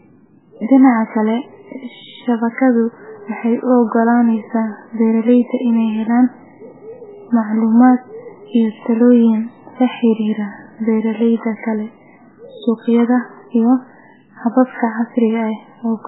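Speech running the whole way through with heavy MP3 compression damage, likely from a very low bitrate on the order of 8 kbps. Nothing survives above 3.8 kHz, so a spectrogram shows a flat ceiling there, while the surviving bands flicker as weak lines drop out frame to frame, giving a watery, swirling sound with smeared consonants.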